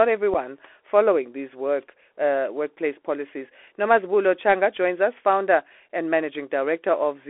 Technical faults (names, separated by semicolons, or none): Bluetooth CVSD headset codec; unconcealed Bluetooth headset packet loss